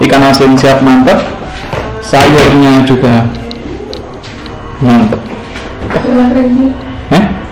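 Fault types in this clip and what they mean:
Hard clipping: the signal overran what a stage could pass, so its peaks were sliced flat, adding dense high harmonics. Here it comes in five bursts from 0.01 s to 7.25 s, overdriven by about 11 to 19 dB, giving a harsh fuzz on every loud sound.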